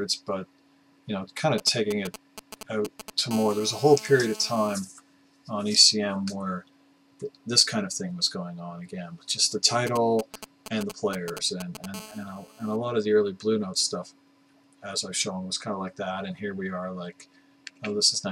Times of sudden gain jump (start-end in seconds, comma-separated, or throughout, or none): none